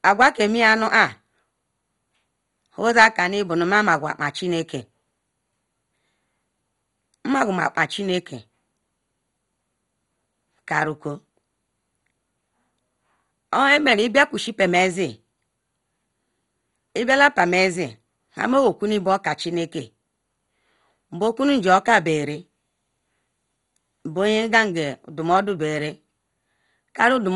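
All the way through, the speech sounds dull and gurgly, with nothing above 11.2 kHz and a grainy, flickering texture in the upper bands. That's likely heavy MP2 compression at a starved bitrate, which fits roughly 56 kbps, switching off sub-bands and quantising the rest coarsely.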